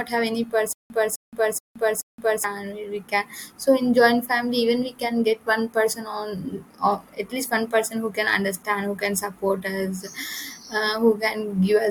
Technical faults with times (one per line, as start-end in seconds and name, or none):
0.73-2.44 stutter with silent gaps